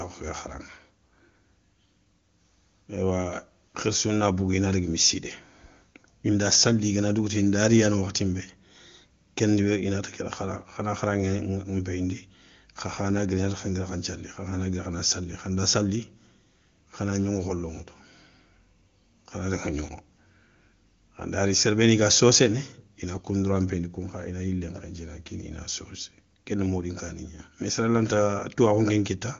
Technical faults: none

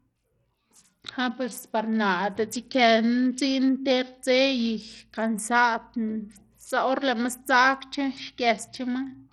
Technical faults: Bluetooth SBC compression

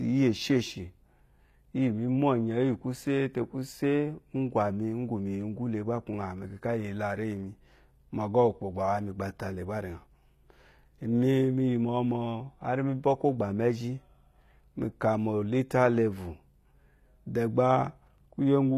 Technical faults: HE-AAC compression

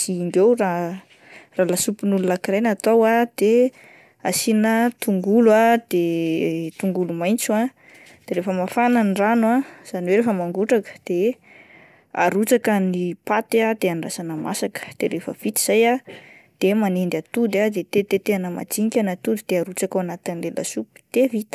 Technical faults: none

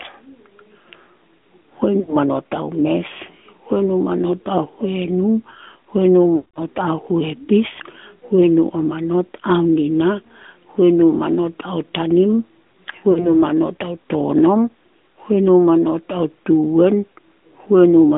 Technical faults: AMR narrowband mobile codec; lost AMR speech frames

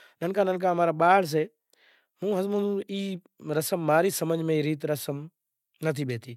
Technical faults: none

